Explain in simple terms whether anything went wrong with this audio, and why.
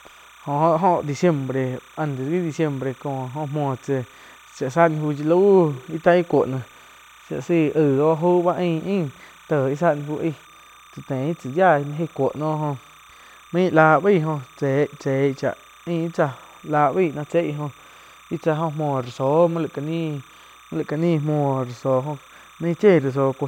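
Timecode bleed runs from start to finish under the speech. Timecode is a synchronising signal, a rapid on-off pulse that marks 30 frames every second, normally kept on its own track or cable. Here some of it has leaked into the recording. It flips between two high pitches, around 1 kHz and 2 kHz, so it comes through as a steady, quiet chirping warble, well below the speech but always present.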